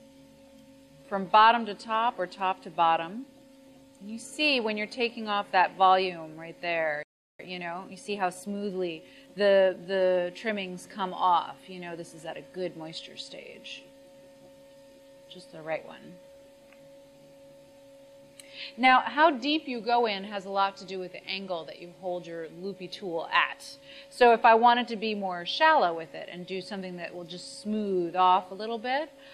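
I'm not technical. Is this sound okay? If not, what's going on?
No. At 7.03 s the sound simply stops for about 0.36 s, then carries on. This is a playback stall, likely the player running short of data. The sound just pauses.

From 7.40 s to 9.80 s the player makes up the lost time with a time-compressed catch-up. It runs about 1.15 times faster by trimming tiny slices, so the sound feels rushed, but the pitch stays normal, not squeaky like sped-up tape.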